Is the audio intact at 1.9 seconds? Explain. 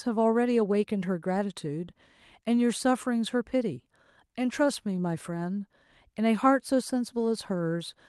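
Yes, the speech at 1.9 seconds is intact, with no fault at that moment beyond the ordinary coding of the call path.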